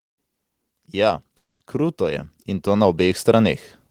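Automatic gain rising runs from 0.91 s to 3.65 s: the gain control judged the speech too quiet and lifted its level by about 8 dB over nearly three seconds, so the voice and the background noise swell together rather than the voice alone growing louder.

A call audio freeze sits between 1.37 s and 1.62 s. The last sound stretches into a fading buzz for about 230 ms, ending in roughly 60 ms of silence, likely because late packets emptied the jitter buffer. The speech then resumes where it stopped, delayed but with nothing missing.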